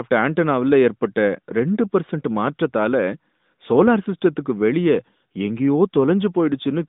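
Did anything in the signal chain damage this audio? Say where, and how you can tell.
No, nothing in the chain damaged this audio.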